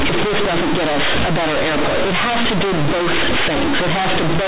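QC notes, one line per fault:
Throughout: companded audio read as linear. The mu-law telephone bytes are played back as plain 8-bit samples without expansion, so every sign change throws the output across roughly half its range and quiet passages come out as loud as peaks. The result is very loud, buzzy distortion with heavy noise filling the pauses in the speech. The waveform is a near-constant, clipped-looking block with no level contour, and the spectrogram shows dense broadband energy right up to the 4 kHz telephone limit.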